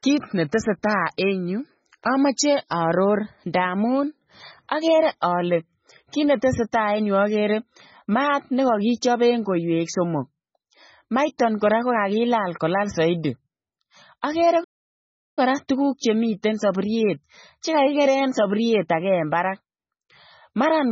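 From start to end, the speech sounds thin, watery and swirly, with sibilants turning metallic and chirpy and consonant onsets blurred. The top end is cut off flat. This is likely heavy MP3 compression at a very low bitrate, around 16 kbps: with so few bits, the encoder discards the treble outright and drops quieter frequency components that flicker in and out between frames.

At 14.63 s the audio stops dead mid-flow and stays silent until 15.39 s, a gap of about 0.73 s, before resuming with "kora tuguuk". That is a playback stall, likely caused by the player running out of buffered data or its audio thread being held up, so nothing reached the output until it recovered and picked up again.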